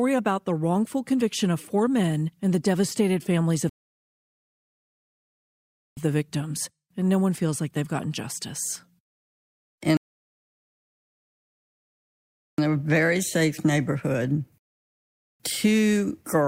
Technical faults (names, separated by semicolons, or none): rebuffering stall